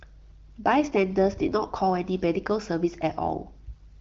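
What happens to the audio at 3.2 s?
Nothing goes wrong at 3.2 s: the speech carries on intact through that moment.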